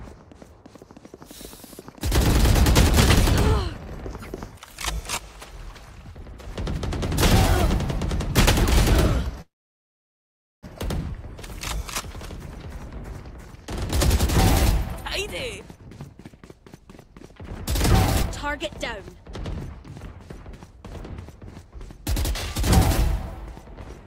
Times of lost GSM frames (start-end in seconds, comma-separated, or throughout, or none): none